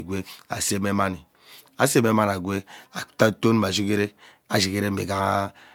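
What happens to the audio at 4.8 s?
At 4.8 s you're hearing generation loss, present across the whole speech clip. It's likely from about four MP3 passes, fitting a 128 kbit/s chain, so it sounds swirly and hollow with blurred attacks.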